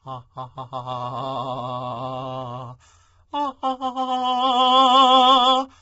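This music clip was likely squeezed through low-delay AAC compression at a very low bitrate, which fits around 16 kbps AAC-ELD. Its short frames smear the harmonics, so the music sounds rough and grainy throughout, with noise between tones and nothing above 7.8 kHz.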